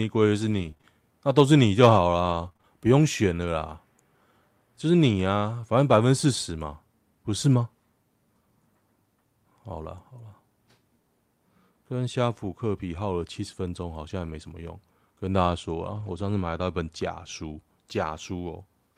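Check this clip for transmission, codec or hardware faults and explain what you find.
Two transmission faults are present, both from packet loss on the network path.

From 0.47 to 3.35 s there are scattered short gaps, about seven of them, none longer than roughly 20 ms. About 160 ms of audio went missing. The receiver bridged each hole by extending the last sound it had, which reshaped around 280 ms in total, with about 5% of that stretch concealed. The speech stays clear, but small ticks, smears and hiccups appear where the concealment patched over the holes.

At 14.21 to 14.35 s and again at 15.87 to 16.21 s, lost packets were rebuilt from error correction. Each missing packet had a low-bitrate duplicate carried in the packet that followed it, as Opus in-band forward error correction does. The decoder played those copies, so there is no dropout. The rebuilt sections, about 80 ms and 180 ms long, sound rougher and noisier than the surrounding speech, with 4 and 9 separate packets replaced in those two spots.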